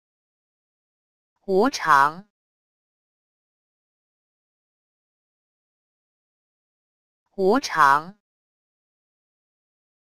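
Nothing is technically wrong with this clip.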